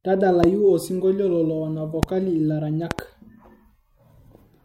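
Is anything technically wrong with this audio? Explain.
Yes. Loud pops occur at 0.44–0.46 s, 2.03–2.05 s, and 2.91–3.01 s, the last a double pop. Peaks reach about 15 to 20 dB above the speech, which continues underneath. This points to a likely voltage step from a switch, plug, static, or driver glitch.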